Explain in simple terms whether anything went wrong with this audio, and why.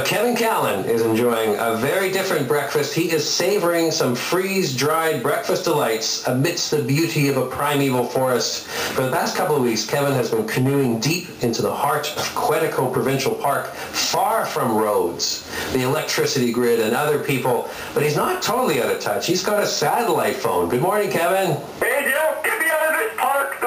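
The input level was likely far too high, so a limiter kept clamping it: gain pumping throughout, with loud and soft parts pushed closer in level and the sound squashed.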